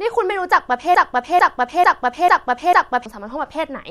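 At 0.95 s the speech catches in a broken-record loop: a 0.45 s fragment plays five times back to back until 3.06 s. Most likely the player or stream stalled and kept resending its last chunk, so whatever followed is simply gone.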